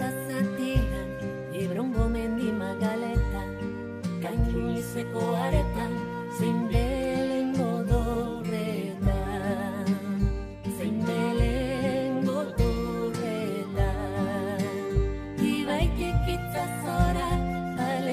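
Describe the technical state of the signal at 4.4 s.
No fault can be heard at 4.4 s; the signal is intact at that point.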